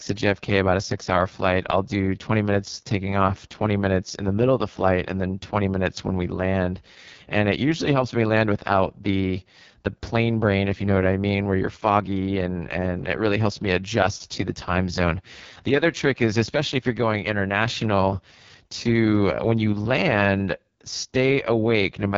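From start to finish, the speech carries heavy AMR wideband (HD Voice) codec damage. It sounds rough and raspy throughout. This fits AMR-WB's lowest rate, about 6.6 kbit/s, where the vocal tract model is starved. Nothing is present above 7.5 kHz.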